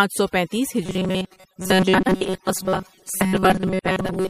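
Overdone noise removal runs through the whole clip. The denoiser was set too aggressively, so every frequency band it judged close to the noise floor was pushed far down or shut off, along with the softer parts of the speech. The pauses fall to near silence dotted with small twinkling specks, and the voice loses its quieter detail along with the background.

A compressed, swirly quality also lasts the full length. The treble stops at a fixed ceiling, and weak spectral detail flickers in and out from moment to moment, leaving a watery shimmer with metallic chirps on sibilants and softened onsets. The cause is likely MP3 compression, and the strength of the damage points to a low bitrate of around 64 kbps, where the encoder runs short of bits and drops high frequencies and faint components.

Robotic sound from repeated short buffers begins at 0.86 s, right after "سو پینتیس", and continues to the end. 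A rigid metallic buzz at 188 Hz sits on the speech while its rough contour still comes through. The likely cause is audio arriving too slowly, with the playback filling the gaps by looping a tiny fragment of about 5.3 ms. That loop length sets the fixed pitch, and most of the real audio is skipped while the fragment repeats.

Frames out of order appear from 1.98 to 2.15 s. Two adjacent blocks of 78.4 ms each were decoded in swapped order, which fits three MP3 frames per block. The passage turns into a garbled flutter. No time is lost, because the same material plays in a scrambled sequence.

A second swap occurs from 3.99 to 4.11 s, this time with blocks of 52.2 ms, consistent with two frames each. It causes the same brief flutter, laid over the ongoing robotic buzz.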